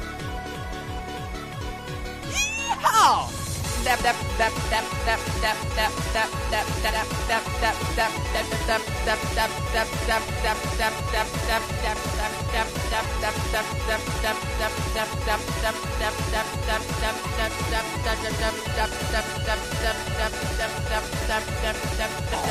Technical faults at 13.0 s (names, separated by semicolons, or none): damaged data in a compressed stream